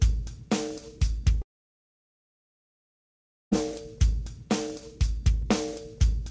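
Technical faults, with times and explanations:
1.42 to 3.53 s, long network dropout: about 2.1 s of audio never arrives, most likely because packets were lost on the network. The receiver briefly extends the last sound as a fading buzz. For nearly all of the gap, roughly 2.07 s, only silence remains. Sound resumes at 3.53 s further along in time, with the missing stretch simply gone. Throughout, the call codec's band limit means nothing is heard above 8 kHz.
5.42 s, dropped samples: a fraction of a millisecond of the waveform is missing, so the signal jumps abruptly from one value to a later one. The loss is far too brief to remove any audible sound. Instead, the instantaneous step produces a single sharp click, which shows as a thin vertical line across the spectrum. A sample-level discontinuity in the stream is the likely cause, not a loss of content.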